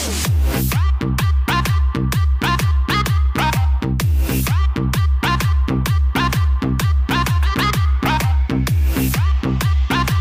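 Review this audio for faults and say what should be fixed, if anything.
Hard clipping runs throughout, from start to finish: the signal is driven about 3 dB beyond what a stage can pass, so around 2 percent of samples have their peaks sliced flat, and those squared-off tops add high harmonics heard as crackle on the loudest moments. Prevent it by lowering gain before the overloading stage so peaks stay a few decibels under full scale.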